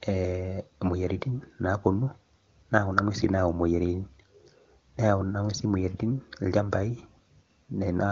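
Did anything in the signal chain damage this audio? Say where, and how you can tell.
No, nothing damaged this audio.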